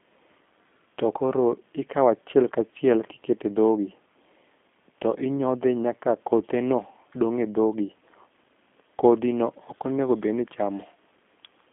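From start to finish the speech sounds narrow, slightly rough and synthetic, with nothing above 3.6 kHz and little below 150 Hz. This is G.729 codec damage: each 10 ms frame is rebuilt from a vocal tract filter, pitch predictor and a few pulses, which fits 8 kbit/s.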